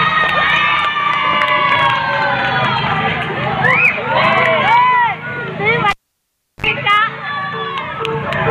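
A live cable was pulled and plugged in at 5.90 s: a pop, 0.71 s of near silence, 58 ms of 50 Hz mains buzz, then a pop at 6.66 s.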